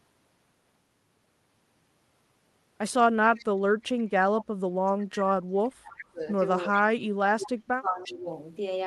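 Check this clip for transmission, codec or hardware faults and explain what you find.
Two kinds of fault are present in this speech clip: echo leak and speech suppressed in double talk.

Echo leak occurs at 3.35–3.45, 3.82–4.03, 5.97–6.05, 6.73–6.82 and 8.04–8.14 s. A faint copy of the speech returns 352 ms behind the original, about 15 to 35 dB below it. The likely cause is a far-end loudspeaker whose echo canceller let part of the microphone pickup through. Room reverberation would be a smeared tail, but this is a distinct repeat at the same fixed lag every time.

Speech suppressed in double talk occurs at 3.37–3.72, 4.43–6.22 and 6.69–8.32 s. The speech is pushed down by as much as about 40 dB, for roughly two seconds in the longest stretch. This is likely an echo canceller that could not separate the local talker from loudspeaker echo while both sides spoke, and attenuated everything. 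Unlike packet-loss dropouts, these drops are level dips spanning hundreds of milliseconds, and they coincide with the echo bursts.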